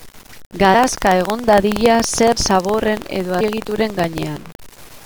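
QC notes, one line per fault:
throughout, low bit depth without dither: gritty, signal-following grain about 25 dB below the sound, likely untreated truncation near 7 bits; spectrogram shows broadband hash, waveform shows stair-steps.
throughout, buffer tearing: 21.5 Hz rattle present only with sound. A tiny slice from about 200 ms earlier splices in each period, fitting a 2048-sample buffer. Waveform shows regular hard joins.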